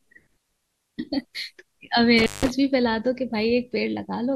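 At 2.19 s an intermittent contact interrupts the speech until 2.50 s: a loose connection opens for about 166 ms, dropping the signal to faint hiss with crackle at each edge. The waveform collapses to near-flat, and the spectrogram shows broadband vertical streaks bracketing a nearly empty gap.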